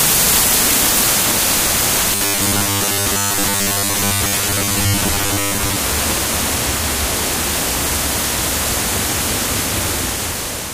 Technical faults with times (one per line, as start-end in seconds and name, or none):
2.15-5.77 robotic sound from repeated short buffers